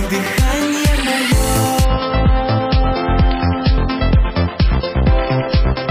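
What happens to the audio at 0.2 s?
Nothing goes wrong at 0.2 s: the audio is intact there, with no dropout, click, distortion or other fault at that moment.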